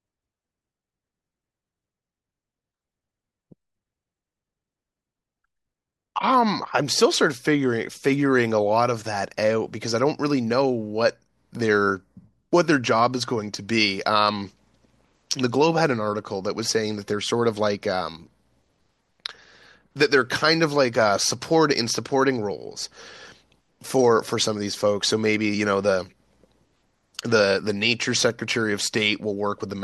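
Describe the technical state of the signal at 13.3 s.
At 13.3 s the speech signal is intact, with no audible fault at that moment.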